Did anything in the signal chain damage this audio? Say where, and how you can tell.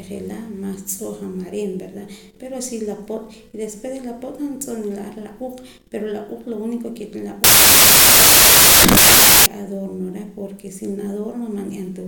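Yes: samples built from the wrong bytes, from 7.44 to 9.46 s, at the sample-format conversion stage. The speech turns into loud, harsh broadband noise because each sample's bytes were misassembled, shifted or swapped, so the rapidly changing low bits became the dominant part of every value.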